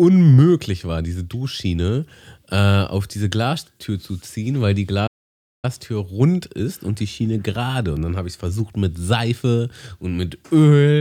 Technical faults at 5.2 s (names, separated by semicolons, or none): playback stall